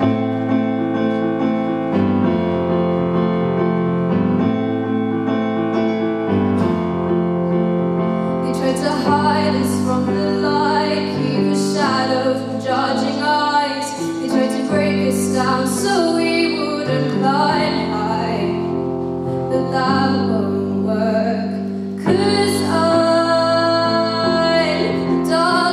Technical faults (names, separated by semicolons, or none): none